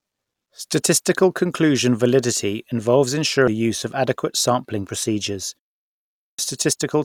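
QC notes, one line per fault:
3.47 s, compressed frames skipped: between "conclusion validity involves" and "use of adequate sampling", the speech jumps forward by roughly 150 ms without falling silent. That length fits about five whole frames of a codec using 32 ms frames, lost from the stream or rejected by the decoder as damaged. The timing lurches because audio is missing.
5.84–6.39 s, clipped start after a pause: after "of adequate sampling procedures" and a pause of about 0.33 s, the next phrase bursts in already underway. About 0.55 s of its opening is swallowed while the output device, which went idle in the silence, wakes and locks again. This is not the harmless muting of pauses, which only drops the background between phrases. Here the speech itself loses its first sounds.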